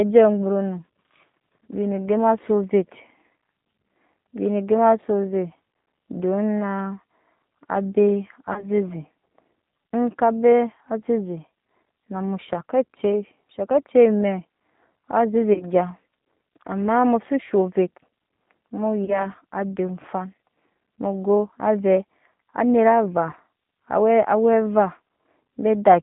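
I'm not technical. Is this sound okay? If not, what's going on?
No. The speech sounds narrow and slightly rough throughout, like a phone call, with a faintly artificial edge. That is the G.729 codec, a compression method used on internet phone lines. Instead of sending the sound itself, it sends a rough recipe for rebuilding a voice, and it drops everything outside roughly 150 Hz to 3.7 kHz. The missing high end makes the speech dull, and the rebuilding makes it grainy.

There are also three short glitches, at 8.53 to 8.65 s, 15.53 to 15.64 s, and 19.05 to 19.27 s. At each one the voice briefly smears into a buzzy tone or a hiss that fades, and then takes a moment to sound normal again. This is VoIP packet loss concealed by the speech codec. A small chunk of sound, about 30 ms, went missing on the network, which fits a single lost packet each time. The decoder filled the gap by stretching out the last sound it had, and the repair lingers briefly afterwards.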